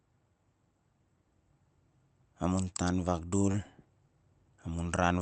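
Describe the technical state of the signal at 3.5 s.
At 3.51 s a short concealed packet loss occurs, lasting until 3.56 s. About 20 ms of the call's audio failed to reach the decoder in time, so the receiver generated 21 ms of substitute signal by continuing the preceding speech, then blended back into the real stream. This is heard as a brief smear or wobble in the speech, and a short consonant falling in that gap can disappear entirely.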